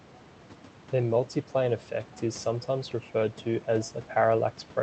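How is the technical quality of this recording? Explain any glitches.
The technical quality of this recording is sound, with no glitches to explain.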